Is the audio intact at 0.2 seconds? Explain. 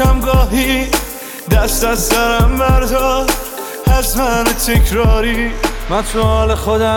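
Yes, the audio is intact at 0.2 seconds, with no fault present at that moment.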